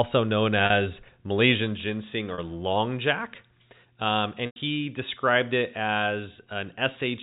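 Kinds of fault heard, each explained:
Packet loss with pitch repetition: dropped packets were bridged by repeating the last pitch period, giving brief buzzy holds of 40 ms twice and a 100 ms gap before "described it".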